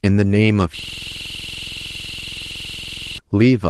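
From 0.79 s to 3.18 s, a system hang loop repeats one 46.4 ms slice, a rapid 21.5 Hz stutter. The hardware kept replaying a frozen buffer, consistent with 2048 samples.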